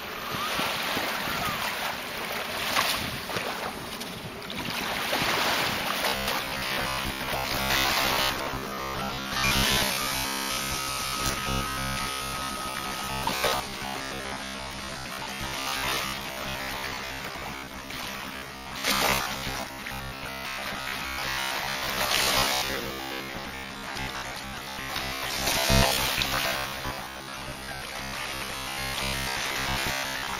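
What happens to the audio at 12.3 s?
At 12.3 s you're in the middle of robotic sound from repeated short buffers, running from 6.08 s to the end. Most of the audio has been swapped for repeats of a roughly 15 ms chunk, likely because fresh audio was arriving too slowly, which stamps a rigid 66.8 Hz metallic buzz over everything.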